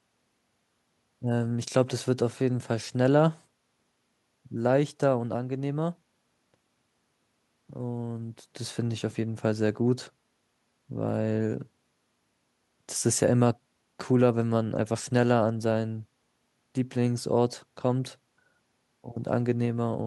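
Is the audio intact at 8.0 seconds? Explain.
Yes, the speech at 8.0 seconds plays through cleanly, with no dropout, click, distortion or other fault at that moment.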